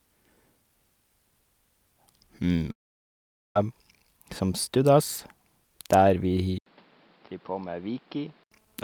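The network most likely stopped delivering audio for a long network dropout from 2.71 to 3.56 s, and about 0.84 s of the speech never arrived. The receiver had nothing to play, so after the briefest trace of the last sound it fell to silence for nearly the whole gap, about 0.81 s. The speech then resumes further on, with the lost stretch simply absent rather than delayed.

At 6.58 s the input was likely switched to a poorer device, and the speech stays on it until 8.52 s. The change opens with a short gap of about 80 ms, after which the voice is roughly 10 dB quieter. The new path passes nothing above 5.5 kHz, so the speech turns dull and boxy. A fresh background noise comes in underneath it, sitting well below the speech.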